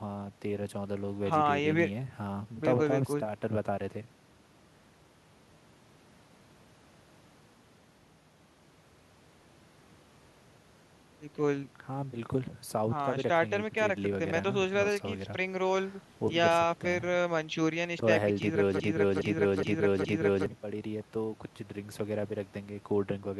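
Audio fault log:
18.80–20.46 s broken-record loop: playback likely stalled and kept resending its last 0.42 s fragment, so that slice of speech repeats four times back to back, replacing the audio that should have followed.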